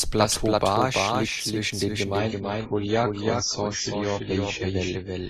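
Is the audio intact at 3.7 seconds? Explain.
No. At 3.7 s the audio is in a reduced-quality stretch from an adaptive stream at a lower bitrate. It starts at 2.19 s, right after "liegt zwischen den", and runs to the end of the clip. The switch is abrupt and gapless. Nothing above 7.6 kHz remains, and coding artefacts are heavier than before 2.19 s. This fits the player stepping down from a high-rate AAC stream to one around 16 kbit/s after the connection slowed.

A doubled audio track is also present at that moment, as it is throughout the clip. A full-band second copy trails the original by around 300 ms at about 5 dB lower level. It has no decay or room colouring, so it is heard as a distinct repeat rather than reverberation. The likely cause is the signal being captured twice, with the second copy arriving through a slower path.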